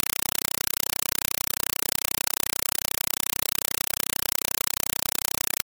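Throughout, loud chattering static replaces the speech, 4 ms bursts at 31.25 per second: a compressed stream played as audio, AC-3 data never decoded.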